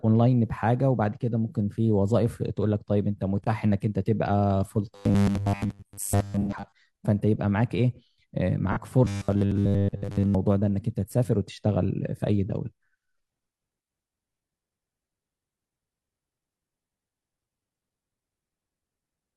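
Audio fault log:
4.95–6.72 s and 9.05–10.35 s, robotic sound from repeated short buffers: new audio likely arrived too seldom, so playback kept looping a 10 ms slice while most of the real audio was skipped, locking the speech into a rigid, metallic 100 Hz buzz that only loosely follows the syllables.
6.41–6.53 s and 8.72–8.78 s, AAC frame loss with concealment: the decoder lost about 85 ms and then 43 ms of data, consistent with two frames and then one, and rebuilt the gaps from the last good spectrum, leaving brief smeared, noisy, phasey patches.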